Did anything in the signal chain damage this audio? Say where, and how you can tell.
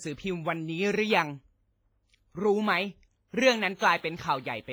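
Yes. Throughout the speech there is a washy, ringing character, with hiss that breathes with the signal and heavy loss of fine detail. This points to the codec stage, likely WMA compression at a low bitrate near 24 kbps, where long blocks smear quantisation noise and weak components vanish.

From 3.76 to 3.81 s a brief hiss runs about 50 ms ahead of a sharp attack, which sounds softened. This is pre-echo, also from the codec. Noise sized for the loud onset is spread evenly across its transform block, filling the quiet moment before it.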